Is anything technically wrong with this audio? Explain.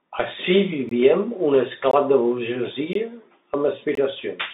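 Yes. Throughout, the speech has passed through the Bluetooth CVSD headset codec, which encodes one up-or-down bit per sample and adapts its step size. The sound sits in a telephone band of roughly 200 Hz to 3.7 kHz, with scratchy sibilants and a granular hiss, consistent with a 64 kbps link.

A gap between chunks appears at 0.89–0.91, 1.91–1.93, 2.93–2.95 and 3.95–3.97 s. The audio arrived in 1-second blocks, and 20 ms of silence was inserted at each join. The speech breaks with short holes at a steady once-per-second rhythm.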